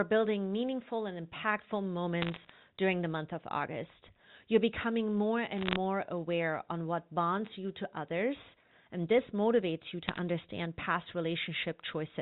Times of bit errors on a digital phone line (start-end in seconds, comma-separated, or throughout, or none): 2.22-2.50, 5.58-5.76, 10.08-10.18